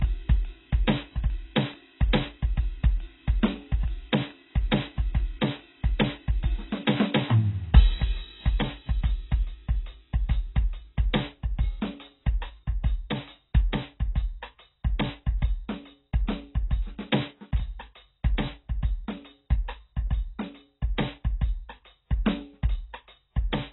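From start to finish, the music sounds dull and smeared. Nothing reaches above 4 kHz. Sustained tones warble, and noisy high sounds turn fizzy. The likely cause is heavy AAC compression, which fits AAC-LC near 16 kbps, cutting off the top and coarsely quantising what remains.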